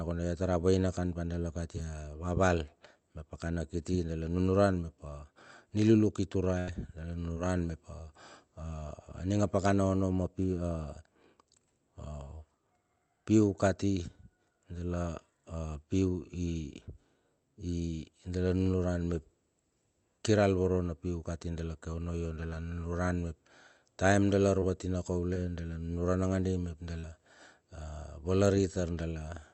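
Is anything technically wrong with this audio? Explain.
Yes. The speech has packet-loss damage in five places.

At 6.59 to 6.69 s there is a burst of packet loss: about 80 ms of audio never arrived in time. The receiver stretched the last sound across the hole and faded it, so you hear a held buzz or fading hiss, then the speech picks up further on with a piece missing. On a spectrogram the harmonics freeze into flat horizontal bands that dim. The waveform shows a repeating, decaying cycle before the audio resumes.

Short concealed packet loss occurs at 7.33 to 7.38 s, 24.60 to 24.64 s, 25.34 to 25.38 s, and 27.00 to 27.05 s. Each time, a brief hole of about 20 ms (about 40 ms at 27.00 s) was patched by continuing the previous sound, either from its pitch or as shaped noise, and then blended back into the real signal. These are heard as quick smears or wobbles, and a consonant may drop out. 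A spectrogram shows a short smooth or blurred patch breaking the fine detail. In the waveform, a few cycles repeat too regularly.

All of this passes through an Opus call path. The spectrogram stops at around 8 kHz, and the call ran at roughly 32 kbps.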